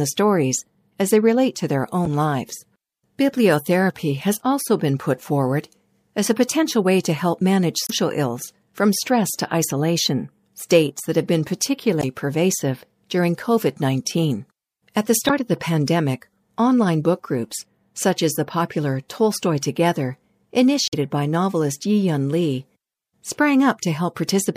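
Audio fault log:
2.03–2.07 s, 7.85–7.90 s, 11.99–12.04 s, 15.26–15.30 s and 20.88–20.94 s: damaged data in a compressed stream. The speech breaks five times into a short chirp, squawk, click or short hole, each about 40 to 60 ms long. Some bytes in the compressed stream were lost or overwritten at these points. The decoder misreads those frames and loses sync. It then hunts for the next valid frame header, and that brief garbled output is the blip.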